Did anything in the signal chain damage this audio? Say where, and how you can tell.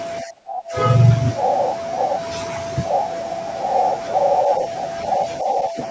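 Yes, in call processing: speech suppressed in double talk at 0.22–0.76 s and 5.42–5.78 s. The echo canceller, likely unable to separate its talker from the far side's echo, pulled the level down by roughly 25 dB, then 10 dB. The waveform envelope pinches inward and the spectrogram darkens across those spans.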